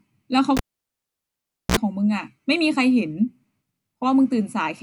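Speech clip, and at 0.57 s the cable gets pulled and plugged in: a pop, about 1.15 s of near silence, then a 49 ms burst of 60 Hz mains buzz as the tip touches first, and another pop when the sound returns at 1.77 s.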